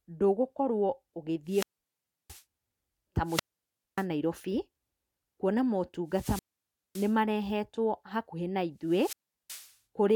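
Wireless microphone squelch dropouts cut the speech at 1.46–2.43 s, 3.25–4.06 s, 6.09–7.18 s and 8.85–9.75 s. Each time the FM link fades, hiss rises, and the receiver squelch mutes the output for about 0.67, 0.59, 0.56 and 0.37 s before the speech returns.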